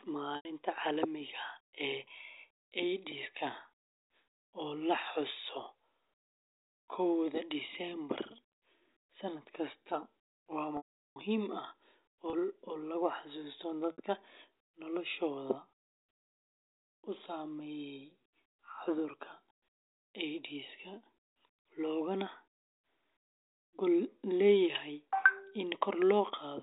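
Packet loss with pitch repetition occurs at 0.36–0.45 s, 10.77–11.16 s after "kasta waa", 12.30–12.33 s before "lagu xasuusto", and 13.92–13.98 s after "lagu xasuusto". Missing audio was bridged by repeating the last pitch cycle. The short gaps sound like a brief buzzy hold. The 390 ms gap fades to silence before the sound returns through the narrowband G.711 telephone coding.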